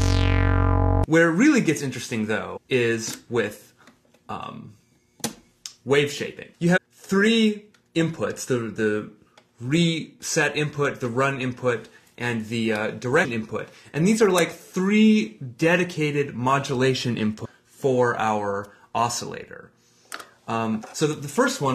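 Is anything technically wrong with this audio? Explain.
Yes. Damaged data in a compressed stream causes brief blips at 2.56–2.58, 6.76–6.78, 13.24–13.26, 17.44–17.46 and 20.81 s. Each time, the decoder loses sync and hunts for the next valid frame.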